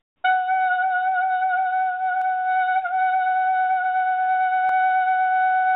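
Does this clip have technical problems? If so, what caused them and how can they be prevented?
Yes. From 0 to 0.24 s the real background is replaced by comfort noise. It is a steady, featureless hiss, about 9 dB quieter than what follows. The likely cause is discontinuous transmission: the sender went quiet and the receiver generated synthetic noise. Disabling DTX on the sending side prevents this.

At 2.22 s and 4.69 s, audio is missing between chunks. Each skip loses roughly 20 ms, and the two sides are butted together. The spacing fits a recorder or processor that likely works in 2.5-second chunks and drops audio at each handover. Using overlapping or continuous buffering prevents it.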